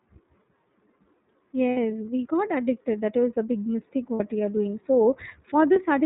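The whole clip has passed through the iLBC codec. The speech was coded frame by frame at narrowband, which fits its 30 ms mode at 13.33 kbps. Nothing above 4 kHz survives, and the speech sounds plainly rough and synthetic throughout.

There are lost iLBC frames at 1.71 to 1.77 s, at 4.14 to 4.21 s, and at 5.73 to 5.79 s. The first two gaps each last about 60 ms and the last about 30 ms. During each gap the decoder repeats the last pitch cycle mixed with noise, so it sounds like a brief held, buzzy vowel. Because iLBC frames stand alone, the speech recovers almost at once.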